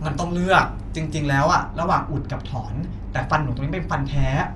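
From the start, the speech is band-limited, with nothing above about 11.4 kHz and a rough, fluttering grain. That points likely to Dolby Digital compression, at a rate fitting 64 kbps. From 1.48 s to the end, de-emphasis applied wrongly cuts the treble further, about 11 dB down at 10 kHz. The speech turns muffled and dull.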